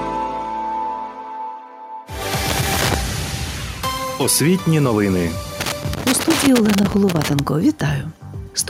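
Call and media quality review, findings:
Loose connector crackle, two bursts: 2.49–2.94 s, then a longer one 5.60–7.39 s. Irregular scratchy crackle, signal chopping in and out. Probably a worn or dirty plug/jack contact making and breaking as it shifts. Reseat or clean it.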